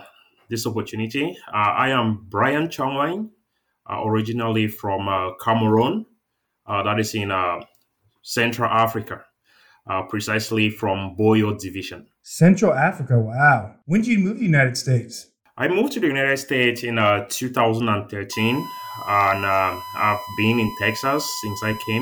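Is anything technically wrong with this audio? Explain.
Yes. USB whine appears at 18.33 s and runs to the end: a steady, fixed-pitch tone at 1 kHz sits under the sound at roughly 15 dB below it. A USB bus draws current in bursts timed to its 1 ms frames, and those pulses leak into the audio through shared power or ground. That periodic draw is heard as a whine at 1 kHz, unchanged in pitch.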